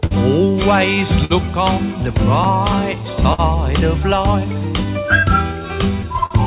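Clock drift between sender and receiver runs through the whole recording. The sending clock runs roughly 4% slow, so the receiver's jitter buffer keeps draining, and small, unevenly spaced timing hiccups recur. On a spectrogram these show as occasional smeared or duplicated slivers rather than clean breaks.

The first short stall from a late packet comes at 0.06 to 0.13 s. A packet arrived late, the buffer ran dry, and the receiver held the last sound for about 49 ms before resuming with nothing lost. It is heard as a brief hold with a slight buzz or dip. On a spectrogram it appears as a frozen, horizontally streaked patch, and on the waveform as a repeating cycle. The same stall recurs at 1.25 to 1.32 s, held about 53 ms.

From 2.96 to 6.20 s, repeated timing corrections take over. The receiver keeps inserting small repeated pieces, which slows playback to about 97% speed and adds roughly a tenth of a second overall. 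This is heard, if at all, as slight hiccups or an unsteady tempo. The waveform shows tiny duplicated segments at uneven spacing.

Within that stretch, another late-packet stall at 3.33 to 3.40 s holds the sound about 51 ms. A final stall at 6.26 to 6.32 s stretches it about 46 ms. All of this passes through a G.711 mu-law call path, so the spectrogram is empty above 4 kHz.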